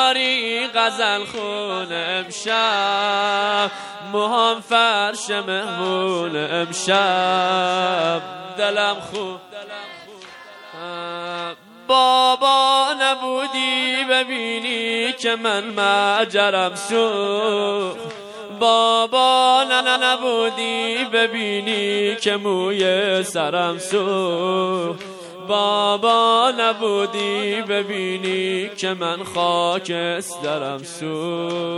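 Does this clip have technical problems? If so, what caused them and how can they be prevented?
Yes. Throughout the clip the sound has a plainly audible watery, swirly texture with smeared attacks, likely from MP3 encoding at a low bitrate near 64 kbps, where the encoder discards weak frequency lines that then flicker between frames. To prevent this, encode at a higher bitrate or keep a lossless master.

Repeated frames cause stutters at 17.23 to 17.34 s, where a 104.5 ms block plays one extra time, and at 19.79 to 20.10 s, where a 156.7 ms block plays two extra times. Each block was written or sent again and decoded again, which fits runs of four and six MP3 frames, and together they add about 0.42 s to the audio. To prevent this, check frame sequence numbers during transfer or writing and drop duplicates before decoding.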